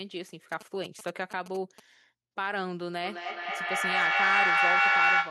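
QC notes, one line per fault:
0.52–1.80 s, GSM signalling bursts: a nearby 2G phone emits short groups of radio bursts while signalling, and the audio circuit rectifies them into a galloping dit-dit-dit of short 217 Hz buzzes, sitting roughly 10 dB below the speech.
3.04–5.30 s, feedback echo between two devices: two devices share the call in one room, so each microphone re-captures the other's playback, which neither echo canceller removes. Speech returns roughly every fifth of a second, ringing and thinner, with repeats piling up to about 8 dB above the speech.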